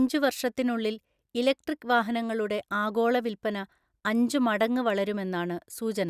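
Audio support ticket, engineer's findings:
No faults found in playback.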